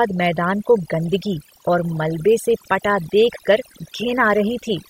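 Overdone noise removal runs through the whole speech clip: an over-aggressive noise reducer pulls individual frequency bands down whenever they sit near its noise estimate, dragging quieter speech detail with them, so the background drops and breaks up into twinkling specks.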